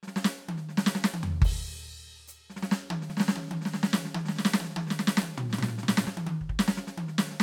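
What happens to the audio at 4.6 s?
At 4.6 s the music sits inside a doubled audio track running from 3.1 s to 6.08 s, likely caused by a second, slower capture path or an edit that holds two copies out of step. A full-band duplicate trails the original by about half a second, some 5 dB quieter, with no decay or room colour, so everything plays twice like a dry slapback. The copy cuts in and out abruptly at both ends.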